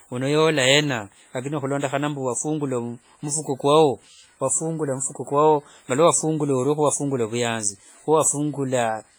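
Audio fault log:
throughout, WMA compression: the speech carries heavy ringing and a washy smear, with hiss that swells and fades along with the signal and quiet detail that drops out entirely. The likely cause is a transform codec like WMA at a very low rate, around 24 kbps, whose long blocks spread quantisation noise over tens of milliseconds. Unlike a plain low-pass or resampling fault, content still reaches about 21 kHz; the damage is smearing and breathing noise, not a missing top end.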